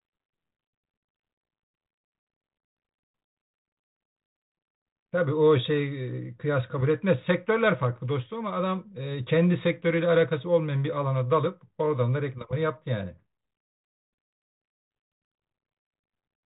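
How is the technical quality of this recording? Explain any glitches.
No glitches turn up anywhere in this speech recording. It has come through G.726 ADPCM at 32 kbit/s, so nothing above 4 kHz is present and the coding damage is light.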